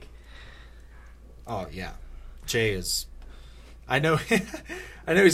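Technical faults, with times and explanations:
No technical faults can be heard anywhere in the recording. There is nothing here that needs a time or an explanation.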